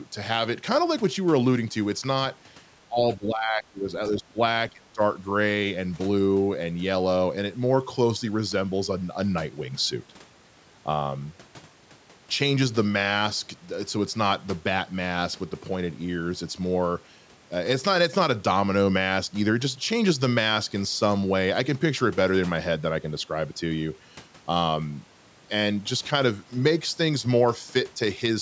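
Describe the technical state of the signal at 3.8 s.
At 3.8 s the speech is sunk well below its surrounding level, roughly 15 dB down at its deepest, near the end of a dip running from 3.17 to 3.92 s. This is speech suppressed in double talk, likely caused by both sides speaking at once. Unable to separate this talker from the loudspeaker echo, the echo canceller turned everything down together.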